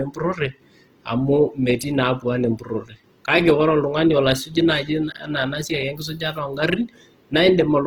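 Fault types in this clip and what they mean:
Opus compression: The speech is plainly degraded throughout, turning grainy, rough and noisy without swirling spectral holes, while content still extends to 20.1 kHz. This likely comes from a low-rate Opus encode in its music (CELT) mode, consistent with about 16 kbps.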